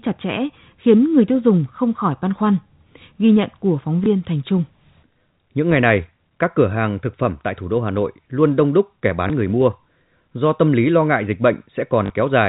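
At 4.04 to 4.06 s after "nhận của phóng", 9.28 to 9.30 s between "luôn đông đúc kẻ" and "người mua", and 12.06 to 12.10 s, packet loss with last packet repeated gives small blips, and a brief robotic stutter at 12.06 s. The waveform shows a copied 20 ms segment (40 ms at 12.06 s).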